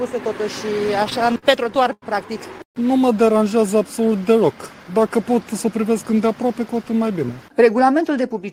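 From 0.87 to 2.05 s the audio has repeated stalls (stutter). Packets kept arriving too slowly, so the jitter buffer emptied twelve times. Each time the last sound was extended, 226 ms in all and up to 92 ms at once, with nothing lost. On a spectrogram this shows as repeated, smeared horizontal stretches.

At 2.63 s there is a call audio freeze lasting 0.15 s. The last sound is held, then drops to silence for about 100 ms before the audio resumes where it left off. This was likely caused by delayed packets draining the jitter buffer. The waveform shows a flat gap.

From 5.54 to 6.44 s a jitter buffer speed-up plays the audio at 107% speed. About 70 ms is trimmed as many tiny pitch-period cuts that shed built-up delay. The pitch stays unchanged but the audio sounds hurried. Harmonics stay level on a spectrogram while events arrive sooner.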